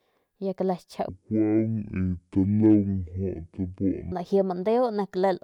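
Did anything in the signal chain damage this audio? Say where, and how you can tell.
Yes, there's a section at the wrong speed from 1.09 to 4.12 s. The speech drops to half speed and sounds about ten semitones deeper, likely from a playback clock mismatch.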